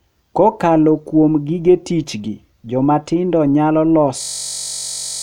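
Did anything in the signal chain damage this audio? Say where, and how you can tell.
Yes. A system hang loop at the driver or buffer stage runs from 4.22 to 5.22 s, after "gi joma tindo nyalo". A 21.33 ms slice, which fits a 1024-sample buffer, repeats as a steady 46.9 Hz buzz, and about a second is lost. The waveform shows identical blocks, and the spectrogram shows lines 46.9 Hz apart.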